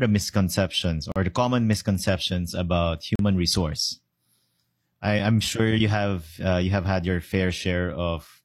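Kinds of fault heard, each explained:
Gap between stream segments: consecutive segment timestamps leave a short hole that playback fills with silence, cutting the speech with hard edges. Dropouts of 40 ms at 1.12 s, 37 ms at 3.16 s and 6 ms at 5.19 s recur every 2 s, fitting 2-second segments.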